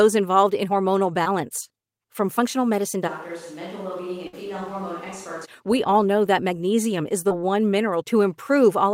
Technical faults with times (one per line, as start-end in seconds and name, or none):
1.23-1.27 short concealed packet loss
3.09-5.44 switch to a distant microphone
4.27-4.35 burst of packet loss
7.29-7.32 short concealed packet loss